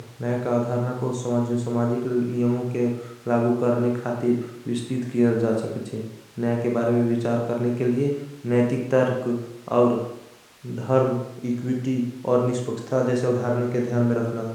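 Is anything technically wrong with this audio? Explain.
No, nothing is technically wrong with this audio.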